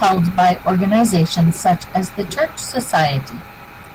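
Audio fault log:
throughout, Opus voice compression: the encoder is starved at a rate that fits about 16 kbps in hybrid mode, with linear prediction coding the lower band coarsely and a thin transform layer above, so the speech sounds plainly hoarse, slightly robotic and dulled.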